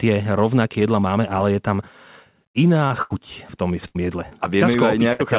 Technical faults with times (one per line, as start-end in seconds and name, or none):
2.88-2.92 short concealed packet loss
3.02-3.12 burst of packet loss
3.88-3.97 burst of packet loss
4.30-4.33 short concealed packet loss
5.13-5.21 burst of packet loss